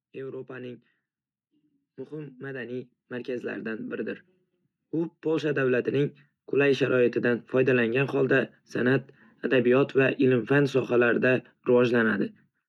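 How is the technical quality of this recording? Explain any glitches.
The recording's quality is hurt by two stretches of automatic gain rising. Between 2.09 and 4.24 s, and again from 4.9 to 8.22 s, the gain control judged the input too quiet and slowly pushed its gain up, by about 8 dB and then about 7 dB. The speech and the background noise swell together rather than holding a steady level.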